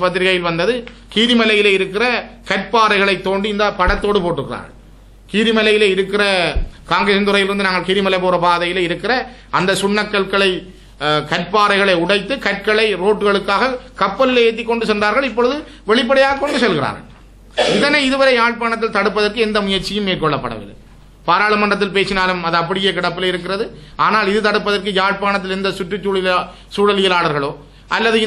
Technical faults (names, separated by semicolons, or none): none